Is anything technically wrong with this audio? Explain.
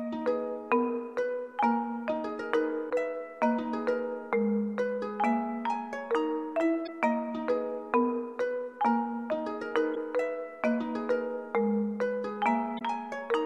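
Yes. Damaged data in a compressed stream causes four brief bursts at 2.86–2.91 s, 6.83–6.89 s, 9.92–9.97 s and 12.76–12.82 s. Each time, the decoder misreads corrupted frames, loses sync and hunts for the next frame header, producing a short chirp or squawk of roughly 50 ms.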